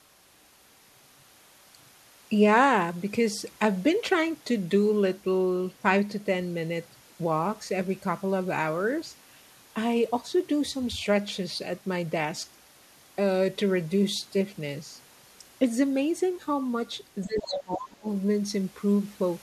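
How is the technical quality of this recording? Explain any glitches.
Two faults cluster near the end, both at once, as the talker and a far-end voice overlap.

Speech suppressed in double talk, 17.26 to 18.08 s: the talker's speech dips sharply, by roughly 25 dB at worst, likely because the echo canceller could not separate speech from echo.

Other side's voice leaking through, 17.39 to 17.58 s: a second voice appears only a little quieter than the talker, likely loudspeaker echo the canceller left in.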